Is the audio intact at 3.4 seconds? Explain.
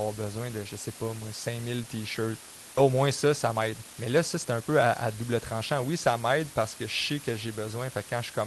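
No. At 3.4 s you're inside a jitter buffer speed-up that runs from about 2.89 to 5.73 s. The receiver had more audio queued than it wanted, so it kept cutting out tiny pitch-period slices, around a third of a second in total. The speech plays about 12% fast at unchanged pitch and sounds a bit rushed.

There's also the low bit depth with dither that runs through the whole clip. The samples are rounded to very few levels, which fits about 6 bits, and the dither turns that rounding error into an even, constant hiss only about 15 dB under the speech, with no gritty distortion.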